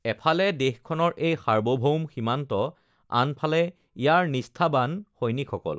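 No technical faults can be heard anywhere in the speech signal.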